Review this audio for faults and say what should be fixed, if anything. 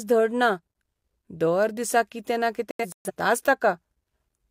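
A digital broadcast dropout hits the speech from 2.71 to 3.11 s. The receiver muted in several short holes, about 0.21 s lost in all. The longest gap is 0.13 s. Bad frames were silenced, and their content is gone. Better reception or stronger error protection would prevent it.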